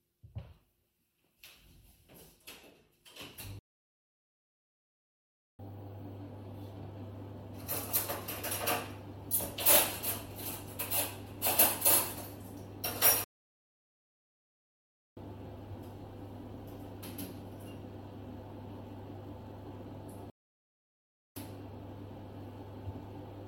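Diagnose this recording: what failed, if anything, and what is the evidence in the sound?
Playback stage: a playback stall. The sound stops mid-flow at 3.59 s for 2.0 s, at 13.24 s for 1.9 s and at 20.30 s for 1.1 s, then resumes. Waveform and spectrogram show flat, empty gaps with abrupt edges, likely from the player's buffer running dry.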